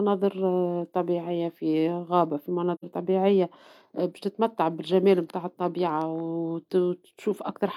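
At about 2.75 s the speech drops into a short, soft-edged gap that lasts until roughly 2.84 s. That's AAC frame loss with muting. The decoder lost a stretch of data and filled it with silence by zeroing the spectrum, and the overlapping windows fade the sound out and back in rather than cutting it. The hole lasts about 85 ms, which fits two missing AAC frames.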